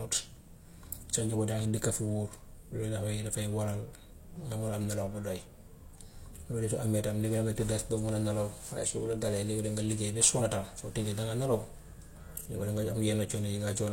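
Right after "nelaw bu", at 5.34–5.40 s, and again at 10.36–10.40 s, there's damaged data in the compressed stream: corrupted frames throw the decoder off sync, giving a short glitch.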